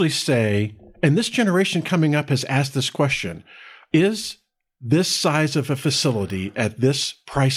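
Two sharp, broadband ticks cut through the speech, one at 5.6 s just after "question is this size" and another at 6.30 s. Each is a bit error spike: a flipped bit throws one or a few samples off by a power of two, then the waveform snaps straight back.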